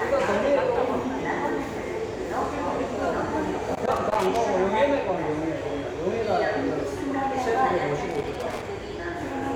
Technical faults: loose connector crackle

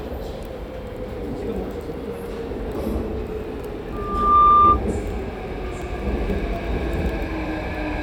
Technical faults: loudspeaker feedback squeal

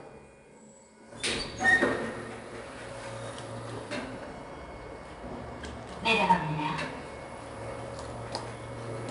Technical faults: 4-bit ADPCM compression

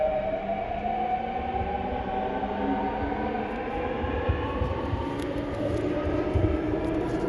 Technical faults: Dolby Digital compression

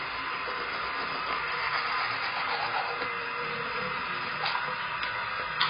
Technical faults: AAC compression

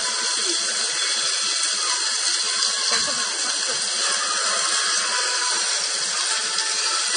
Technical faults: transcoding between lossy codecs

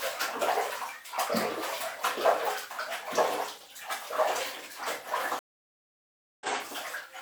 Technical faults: stream reconnect

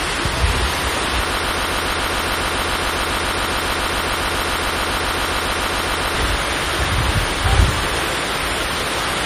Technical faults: low-bitrate audio saved at a high bitrate; broken-record loop

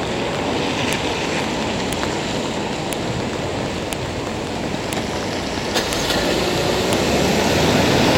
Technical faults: file header played as audio

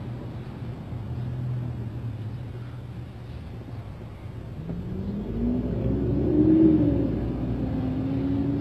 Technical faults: HE-AAC compression

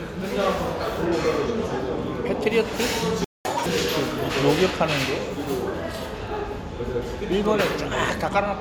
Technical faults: playback stall; catch-up at higher speed

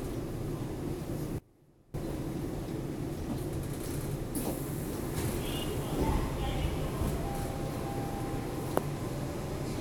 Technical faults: audio dropout to a faint residue

